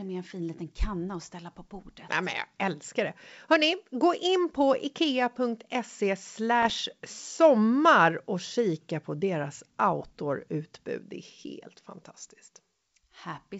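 From 6.62 to 6.80 s, just before "sommar och kika på", pops and a rough burst with brief level jumps appear. These are bit errors on an ADPCM link: flipped bits throw off the decoder's step size and predictor, so each error rings on for milliseconds.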